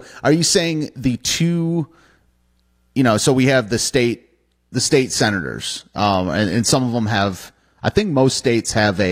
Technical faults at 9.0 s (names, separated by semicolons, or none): adaptive stream at a lower bitrate